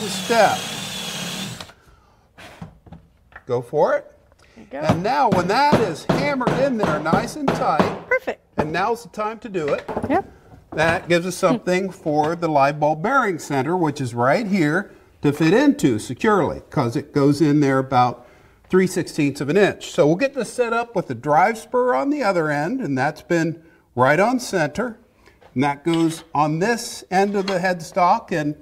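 No technical faults can be heard anywhere in the audio. Nothing breaks the continuity of the sound at any point.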